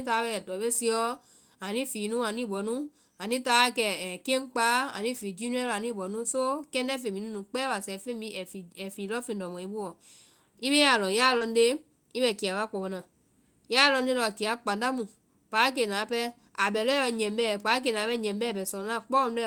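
At about 11.37 to 11.50 s, just before "nde i bɛ kiya", there's a short concealed packet loss: roughly 40 ms never arrived in time, and the receiver stretched the last sound over about 34 ms of it before blending back. You hear a quick smear, and the timing slips by about 10 ms.

Inside that stretch, at 11.41 s, one lost packet was rebuilt from error correction. The next packet carried a low-bitrate copy, so those 20 ms play without a gap but come out rougher and grainier than the audio around them.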